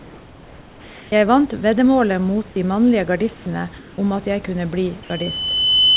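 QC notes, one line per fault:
0.0–1.12 s, 3.34–3.46 s and 3.78–3.98 s, comfort noise in place of the background: in all three pauses the room tone, normally about 24 to 26 dB under the loud parts, flattens into a smooth, detail-free hiss about 2 to 3 dB quieter. The last one ends just before "om at jeg kunne". The likely cause is discontinuous transmission: the sender goes quiet when it hears no speech, and the receiver fills the gap with synthetic noise roughly matched to the background.
2.52–2.56 s, sound dropped by the voice detector: between "vant veddemålet mot" and "de mannlige", 40 ms is swapped for steady noise, and about 20 ms of actual speech goes missing. The detector likely mistook that quiet stretch for background, stopped sending, and the receiver played comfort noise until it triggered again.
5.03 s to the end, loudspeaker feedback squeal: right after "at jeg kunne bli", a single tone at 3 kHz swells over about a second until it sits roughly 5 dB above the speech. 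The microphone is hearing the loudspeaker it feeds, and at 3 kHz the loop gain tops one, so that frequency keeps feeding on itself. It still fits under the 4 kHz ceiling of the narrowband call path.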